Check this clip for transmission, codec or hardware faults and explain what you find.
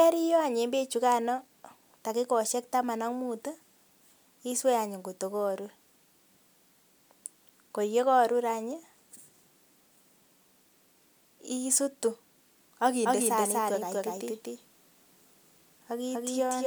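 From 13.05 s to the end, the speech is heard twice: a second, full-band copy trails the first by about a fifth of a second at roughly the same loudness, so every syllable gets a flat, dry repeat with no room tail, and the copy cuts in abruptly. This is a doubled audio track, likely from the same signal being mixed in a second time through a slower path, or from an edit leaving two out-of-step copies.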